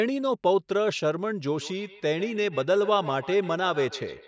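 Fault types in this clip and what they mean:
Feedback echo between two devices: From 1.55 s to the end, the speech returns at a steady interval of roughly 150 ms. A second device replays it into this microphone, and the echo canceller cannot remove it. The thin, ringing repeats reach about 16 dB below the speech.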